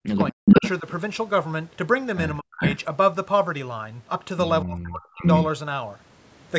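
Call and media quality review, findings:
Speech suppressed in double talk: speech dips or drops out at 0.0–0.63 s (deepest about 40 dB, roughly half a second affected), 0.80–0.86 s (slight, about 5 dB), 2.39–2.62 s (about 40 dB) and 4.62–5.23 s (about 35 dB). Likely cause: the echo canceller's suppressor attenuating near-end speech while the far end talks.

Echo leak: delayed copies of speech at 0.27–0.70 s and 2.61–2.77 s (347 ms delay) and at 4.84–4.88 s and 5.19–5.45 s (467 ms delay). Levels range from about 25 dB below the speech to about 10 dB above it. Likely cause: residual loudspeaker echo passing the far-end canceller. Band-limited to 8 kHz by the call's microphone path.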